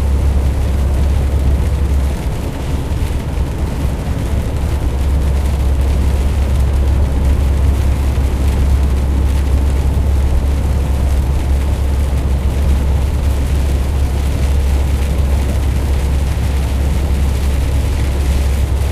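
A brief smeared blip interrupts the everyday sound at 7.01 to 7.03 s and again at 13.91 s, each time with a small jump forward rather than a hard click. These are compressed frames skipped: about 50 ms of audio goes missing each time, which fits two lost frames of 23.2 ms. The decoder never received them or rejected them as damaged. Because adjacent frames overlap, the join blurs instead of snapping.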